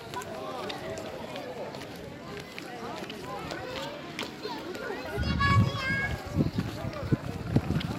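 From 7.56 to 7.67 s the sounds break into DAB burbling, with short blips of noise in single sub-bands. Bit errors, at a rate of a small fraction of a percent, slipped past error correction and corrupted sub-band samples, which points to about ten damaged MP2 frames. Unlike dropouts, nothing falls silent.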